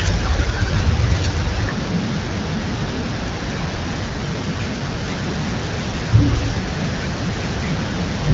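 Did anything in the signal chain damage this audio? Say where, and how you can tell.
Yes, an AMR rate drop at the network and codec stage. From 3.99 s to 5.08 s the speech turns rougher and more synthetic, with no gap and no loss of band. That fits the link forcing AMR-WB down from 12.65 to about 8.85 kbit/s, spending bits on error protection.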